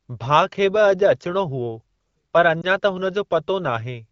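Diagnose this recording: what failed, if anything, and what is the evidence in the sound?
At the network and codec stage, a speech frame failed its checksum and was dropped. Between 2.61 and 2.66 s the AMR-WB decoder concealed it by repeating the previous pitch and vocal-tract settings at reduced gain. This is heard as a brief dip or warble, which points to a single lost 20 ms frame rather than a longer run.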